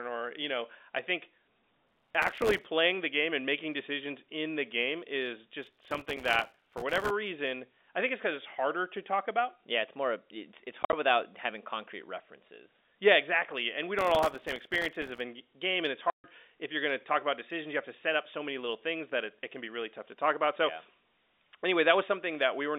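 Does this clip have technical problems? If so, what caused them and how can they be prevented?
Yes. Processor overload crackle tears through the sound at 1.87–2.65 s (after "you know i think"), 5.63–7.10 s (after "in the game is") and 13.99–15.20 s: a dense run of tiny silent skips from very short buffers missing their deadlines. This makes a gritty texture rather than distinct holes. Larger buffers or a lighter processing load would prevent it.

Packet loss filled with silence opens clean, hard-edged gaps at 10.83–10.93 s (between "it's more it's it's" and "without having concrete references") and 16.10–16.24 s. Their lengths are multiples of a roughly 10 ms packet, which sets them apart from the crackle. Packet loss concealment and a jitter buffer would hide them.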